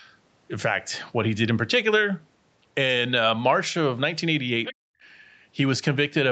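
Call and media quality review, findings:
Other side's voice leaking through, 4.64–4.73 s: a short second voice under the talker, roughly 10 dB down. Likely cause: the echo canceller left some far-end loudspeaker playback in the mic signal.

Background gated by the echo canceller, 4.73–5.03 s: room tone abruptly drops out, falling about 40 dB for around a third of a second, then returns. The canceller clamped the mic hard during loudspeaker playback and released it afterwards.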